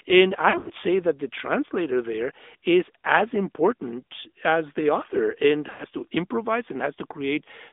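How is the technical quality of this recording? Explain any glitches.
The whole recording has the narrow, buzzy and synthetic quality of a mobile call, with two short dropouts. Throughout, this is the AMR narrowband mobile codec. The band runs only from about 250 Hz to 3.6 kHz, so sibilants sound dull and the low end sounds thin. The codec rebuilds the voice from a vocal-tract model driven by sparse pulses, and at a rate that fits the 10.2 kbps mode that modelling leaves a plainly audible rasp.

From 0.50 to 0.72 s, just before "say that the translator", the sound wavers and thins in patches over about 200 ms, with the longest gap around 80 ms. These are lost AMR speech frames. When frames fail, the decoder repeats the last good pitch and filter settings at falling gain, which fits about seven scattered 20 ms frames. At 5.70 to 5.85 s, between "as the author and" and "to improvise", a 100 ms stretch smears and fades briefly before the speech returns.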